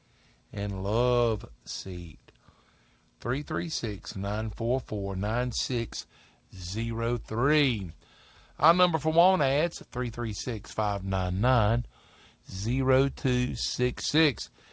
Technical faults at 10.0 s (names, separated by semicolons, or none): none